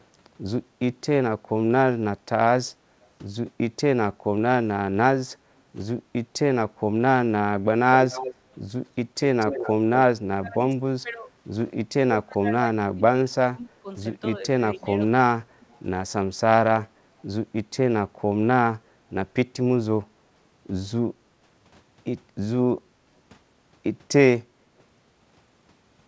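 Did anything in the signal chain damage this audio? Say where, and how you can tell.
Yes. At the call-processing stage, speech suppressed in double talk dips the speech at 1.37–2.08, 8.32–9.2, 10.17–15.0 and 22.72–23.1 s, deepest by about 30 dB in the long middle stretch. The likely cause is the echo canceller ducking both sides when talkers overlap.

An echo leak at 8.1–8.34, 9.39–9.7, 15.62–15.8 and 17.19–17.23 s carries a copy of the speech delayed by 238 ms. It is about 10 dB below the speech at first and about 35–40 dB down later. The likely cause is loudspeaker pickup that the far end's canceller did not fully remove.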